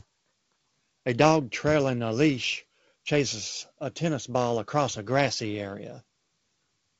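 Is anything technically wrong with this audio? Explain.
No, nothing is technically wrong: the speech comes through G.722 wideband telephone coding at 48 kbit/s, with content reaching up to about 7.8 kHz and only the light coding texture expected of that path.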